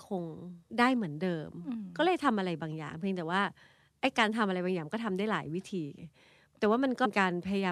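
At 0.70 s and again at 7.04 s the speech jumps ahead, with compressed frames skipped: roughly 150 ms, then about 300 ms, go missing.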